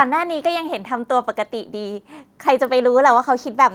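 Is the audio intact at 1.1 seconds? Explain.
Yes, at 1.1 seconds the speech is intact, with no dropout, click, distortion or other fault audible at that moment.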